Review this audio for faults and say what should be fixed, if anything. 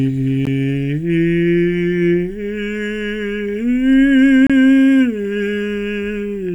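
The music drops out to hard-edged silence at 0.45 s (14 ms) and from 4.47 to 4.50 s. These are gaps between stream segments: timestamps 4 s apart leave holes filled with silence. Align segment timestamps so each segment starts exactly where the previous one ends.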